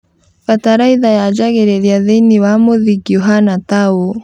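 Nothing stood out on listening to this recording.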